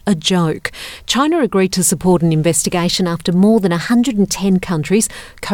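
From 2.61 s to 4.42 s the sound runs about 5.5% fast and rises about 93 cents, just under a semitone, then snaps back to normal pitch and tempo. This is a drift correction step, likely from clock-matching software jumping the playback rate to rebalance its buffer. Unlike wow or flutter, the pitch doesn't waver or drift gradually. It holds one fixed offset with abrupt edges, and speed and pitch move together rather than pitch alone.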